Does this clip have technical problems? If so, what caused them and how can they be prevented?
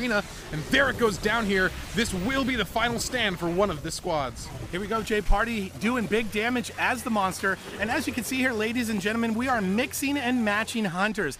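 No, this clip has no technical problems, so there is nothing that needs preventing.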